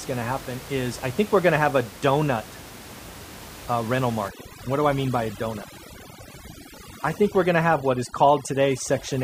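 From 4.29 s, right after "uh rental", overdone noise removal suppresses bands near the room noise (about 17 dB below speech), leaving twinkling near-silence.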